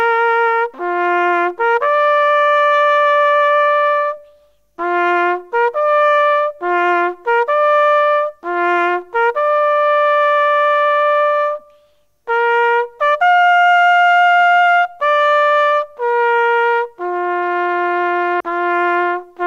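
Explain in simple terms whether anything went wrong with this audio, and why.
Yes, something went wrong near the end, at about 18.39 s. The likely cause is a stream segment skipped: the audio was delivered in short chunks, one chunk failed to arrive, and the player moved straight on to the next. At that moment the sound gives a brief blip and jumps ahead abruptly, so a piece of the material seems to be missing rather than played.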